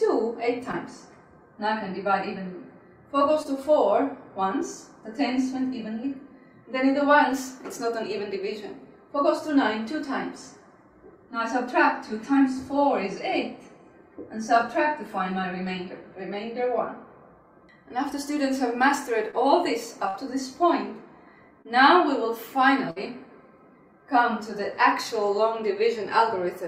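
Short concealed packet loss appears at 0.71–0.75 s and 3.43–3.47 s, then again at 19.31–19.35 s. Each time about 20 ms of audio failed to reach the decoder, and the receiver patched the hole by extending the preceding sound for roughly 15 to 19 ms before blending back into the real signal. The result is a brief smear or wobble, and a very short sound falling in the gap can drop out.

A burst of packet loss follows at 20.09–20.16 s. About 60 ms went missing in a row, and concealment carried the last sound forward for about 52 ms while fading it down, heard as a held buzz or decaying hiss. The audio then resumes further on, with that stretch absent.

Another short concealed packet loss occurs at 21.62–21.67 s. Again about 20 ms was lost, but the fill here runs longer, around 28 ms.

A second burst of packet loss sits at 22.91–22.98 s, with about 60 ms lost and roughly 55 ms of fading concealment. 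It produces the same held-then-decaying tail and a skip where the audio picks up again.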